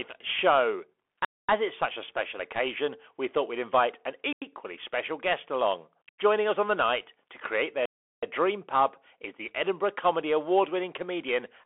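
All the way through, the speech carries the Bluetooth CVSD headset codec: nothing above 3.8 kHz, gritty hiss underneath, and scratchy, overloaded esses where the one-bit step can't keep up. Then blocks of digital silence cut in hard at 1.25 s (0.24 s), 4.33 s and 6.09 s (about 93 ms each, fitting an unfilled 4096-sample buffer), and 7.86 s (0.37 s, like a 16384-sample one).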